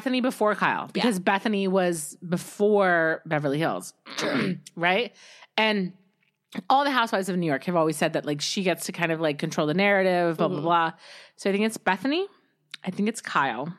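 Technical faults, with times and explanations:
No technical faults detected in the speech recording.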